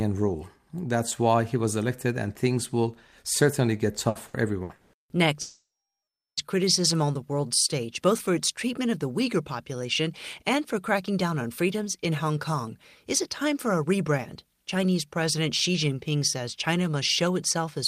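Just after "things will certainly get", from 4.09 to 4.96 s, repeated packet loss (robotic sound) chops the speech. Four holes, the longest 180 ms, are patched by stretching the previous sound, covering 41% of that span. The result sounds choppy and broken, and a spectrogram shows smeared, repeated harmonic bands in place of natural transitions.

From 5.41 to 6.40 s, about a second of audio vanishes before "criticism on", most likely from a long network dropout. A brief fading buzz or hiss carries the last sound forward, then roughly three-quarters of a second of silence follows, visible as a flat waveform and a blank spectrogram before the speech resumes.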